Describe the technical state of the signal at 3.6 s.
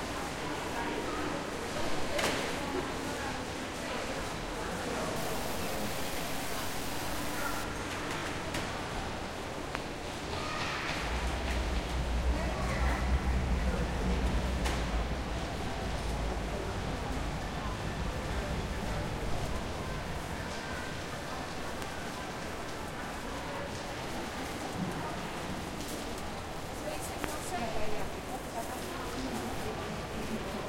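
At 3.6 s the signal is intact, with no audible fault at that moment.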